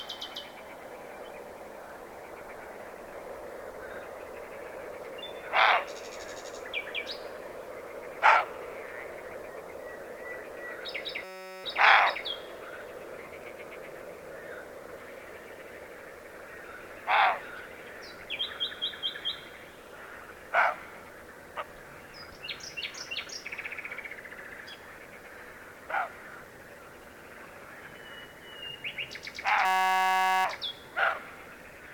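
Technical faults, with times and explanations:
11.24–11.64 s and 29.65–30.45 s, system hang loop: the playback path stalled while the output hardware kept replaying the same ring buffer, so a 5.33 ms slice of audio repeats exactly, about 76 times in the first event and 149 in the second. At that length the repetition fuses into a steady 188 Hz buzz rather than a stutter, which fits a 256-sample buffer. Essentially no audio is lost once playback resumes.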